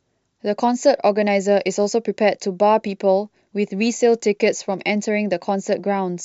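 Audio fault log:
No faults are present in the speech signal, which shows no technical problems at any point.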